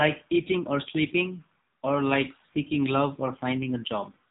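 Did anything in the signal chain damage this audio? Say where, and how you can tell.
Yes, AMR narrowband mobile codec damage throughout. Nothing above 3.8 kHz, with a buzzy, synthetic edge to the speech that fits a low AMR-NB rate near 6.7 kbps.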